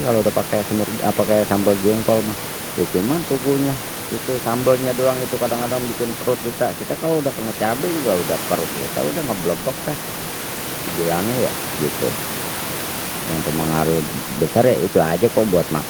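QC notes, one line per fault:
Nothing here needs flagging, just some room noise sitting about 11 dB below the speech, which is part of the recording itself.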